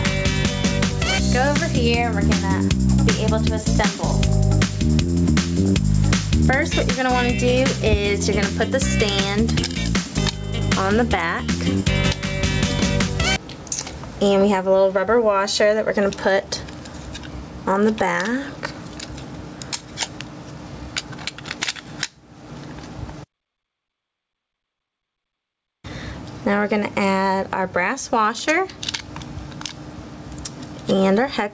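All the way through, there's gain pumping: the gain swings by around 15 dB, so everything feels squashed. The likely cause is gain set far too high, with a fast limiter clamping down. The 8 kHz ceiling is just the call path.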